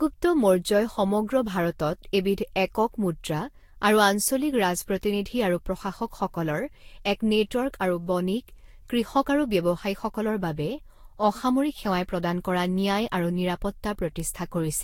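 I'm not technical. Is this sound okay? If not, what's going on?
No. Generation loss runs through the whole clip: the speech sounds swirly, hollow and smeared, with softened consonant attacks and nothing above 16.6 kHz. The likely cause is repeated lossy compression, about four times over, each pass adding fresh damage.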